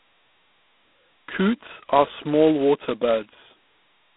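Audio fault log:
throughout: G.726 ADPCM. The speech has a harsh, rasping hiss that rises and falls with its level. Each sample carries only a coarse difference from a predicted value, so quantisation noise rides on every syllable. Damage this heavy fits the 16 kbit/s mode. The band runs from about 200 Hz to 3.5 kHz, typical of a telephone line. Nothing passes above 3.8 kHz, so the top end sounds dull and closed.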